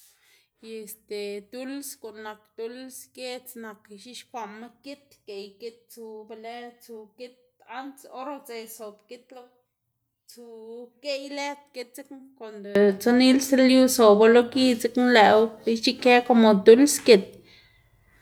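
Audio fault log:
0.0–12.75 s, one channel inverted: the speech drops by about 22 dB and turns faint, with the centred voice nearly gone, then returns to full level at 12.75 s. The likely cause is one stereo channel with reversed polarity, so the shared centre cancels when the two sides are summed to mono. The waveform shows a shrunken envelope for this span, and the spectrogram shows faint energy until the sudden recovery.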